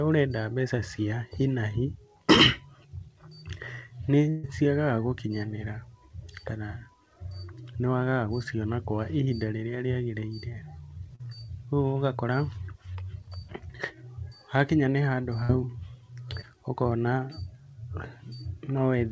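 A speech recording carried over a call link, with nothing above 8 kHz, as a wideband codec like G.722 would produce. There are two bursts of packet loss, at 4.30 to 4.45 s and 15.43 to 15.51 s. Each drops about 140 ms and 60 ms of audio. The receiver extends the last sound and fades it, giving a held buzz or dying hiss. Then the speech jumps ahead. There are also two short concealed packet losses, at 11.15 to 11.21 s and 16.41 to 16.44 s. They lose roughly 40 ms and 20 ms. The decoder patches each gap with continued pitch or shaped noise, then crossfades back. The result is a brief smear or wobble.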